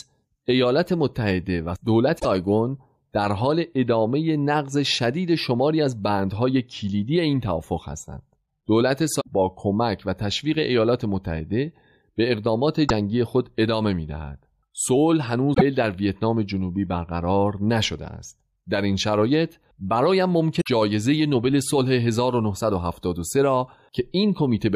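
At 2.16–2.25 s, 9.18–9.29 s, 12.84–12.91 s, 15.51–15.62 s and 20.57–20.68 s the speech is broken by short chirps, squawks, clicks or holes, each lasting roughly 65 to 110 ms. These are damaged data in the compressed stream. Corrupted bytes make the decoder misread or refuse the affected frames and lose sync. It then searches until it locks onto a valid frame header again, which produces the brief glitch or gap in place of the speech.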